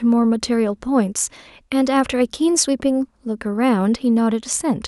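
A short bit of speech, and nothing technically wrong turns up anywhere in it.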